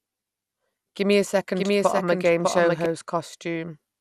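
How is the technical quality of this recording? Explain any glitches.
The recording is noticeably degraded, with coding damage throughout and a stretch where the speech overlaps itself.

Throughout, the speech sounds dull and gurgling, with a granular roughness and nothing above about 14.3 kHz. This is likely MP2 compression, fitting an 80 kbps stream: too few bits switch off upper sub-bands and coarsely quantise the remaining ones.

From 1.56 to 2.86 s, a second full-band copy of the speech runs underneath, trailing by around 0.7 s and about 5 dB quieter, with no reverberant tail. It cuts in and out abruptly. This is a doubled audio track, likely from the same signal being captured twice out of step.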